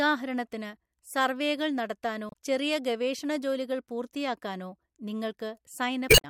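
A short squawk breaks into the speech from 2.27 to 2.34 s, and a longer garbled blip follows from 6.06 to 6.25 s. Both come from damaged data in the compressed stream: the decoder misreads corrupted frames, loses sync, and garbles the audio until it locks onto a valid frame header again.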